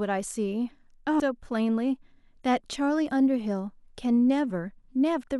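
Damaged data in the compressed stream hits this speech at 1.20 s and again from 5.23 to 5.26 s. Corrupted bytes there make the decoder misread frames and lose sync until it finds the next frame header, producing a short chirp, squawk, click or hole each time.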